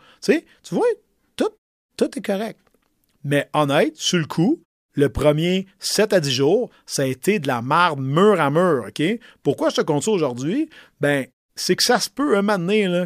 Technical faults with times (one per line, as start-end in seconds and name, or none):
none